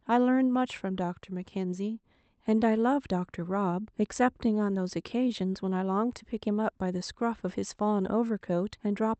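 The sender's audio clock runs slower than the receiver's by around 2 percent, a clock drift between sender and receiver that lasts the whole speech clip. Because fewer samples arrive than the receiver plays out, its jitter buffer keeps draining, so the playback side must stretch the stream to avoid running dry. The result is a faint, uneven sense that the pacing never quite settles, heard over the band-limited Opus sound of the call path, which tops out near 8 kHz.

From 0.39 s to 8.89 s the receiver makes repeated timing corrections, padding the signal by repeating short slices so it stays in step with the slow sender. All the edits go the same way, adding time, and together they lengthen the stretch by something like a sixth of a second, playing it at roughly 98 percent speed. Each insertion is tiny and spaced irregularly, so it comes across as slight hiccups and a wavering, faintly dragging tempo.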